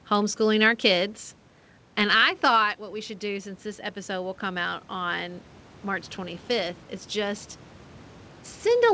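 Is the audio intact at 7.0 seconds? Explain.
No. At 7.0 seconds the audio is in the middle of an automatic gain rising event, which runs from about 3.21 to 7.5 s, starting just after "thought what we should". The input level fell by about 9 dB. The gain control treated it as too quiet and raised its gain gradually, by about 5 dB in total. The voice and the room noise behind it swell upward together over those few seconds.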